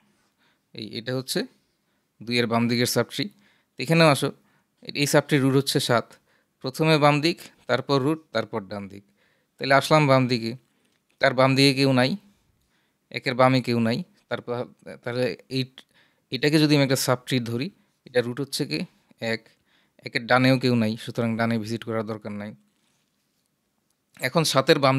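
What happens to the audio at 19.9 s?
Nothing goes wrong at 19.9 s; the audio carries on intact through that moment with no audible fault.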